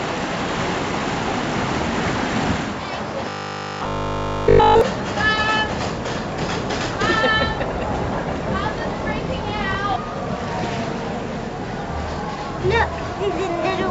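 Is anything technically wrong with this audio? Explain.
Yes. From 3.29 to 4.81 s there is robotic sound from repeated short buffers, likely caused by audio arriving too seldom, so a roughly 20 ms chunk is looped entirely in place of real audio. That loop imposes a rigid 50 Hz metallic buzz. A waveform shows identical repeating 20 ms cycles, and a spectrogram shows evenly spaced harmonic lines 50 Hz apart.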